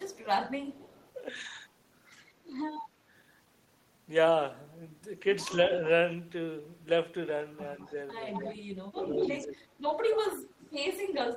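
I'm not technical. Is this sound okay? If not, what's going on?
No. There's an echo leak, likely from an echo canceller on the far end that didn't fully remove its loudspeaker's sound. A delayed copy of the speech trails behind at 0.07–0.19, 0.73–1.12, 5.65–5.69, 7.8–9.44 (loudest there) and 10.49–10.66 seconds.

Speech is also suppressed in double talk: when both sides talked at once, the canceller likely turned the talker down too. The speech dips or briefly drops out at 0.22–0.63 and 8.35–9.63 seconds.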